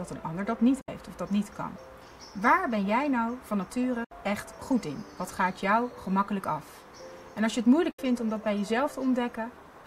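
At 0.81 to 0.89 s, 4.04 to 4.12 s and 7.91 to 7.99 s, a digital broadcast dropout mutes the receiver after bad frames. An 8 ms fade leads into roughly 64 ms of silence, which fits two lost frames. Unlike a click or concealment glitch, the sound simply vanishes and resumes further on.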